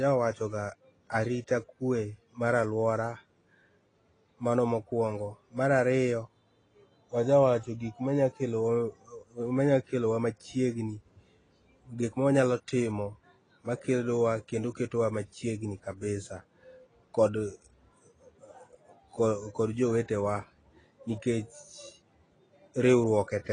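From start to finish the speech carries plainly audible AAC compression damage, most likely from AAC-LC at a low bitrate, somewhere around 24 kbps. Nothing comes through above about 9.7 kHz, so the top end sounds dull and closed in. At that rate the encoder can't afford every band, so parts of the spectrum drop out or get patched with stand-in noise, and you hear sibilants go fizzy and held sounds take on a smeared, warbly edge.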